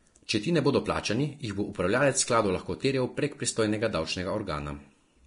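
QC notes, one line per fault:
Throughout, Vorbis compression: hissy, grainy speech with blurred attacks and nothing above 10.6 kHz, likely heavy low-bitrate Vorbis coding, which fits about 33 kbps.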